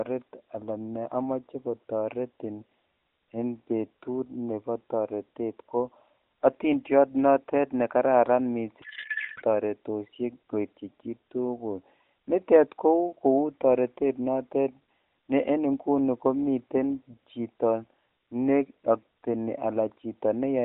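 A codec payload misread from 8.82 to 9.44 s: octet-aligned AMR frames were decoded as bandwidth-efficient, shifting every field, so the speech turns into garbled, warbling noise.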